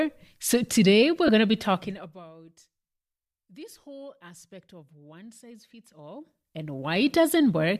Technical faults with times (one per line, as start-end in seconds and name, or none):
1.27-1.29 lost LE Audio frames
1.74-2.25 zipper noise
5.79-7.16 zipper noise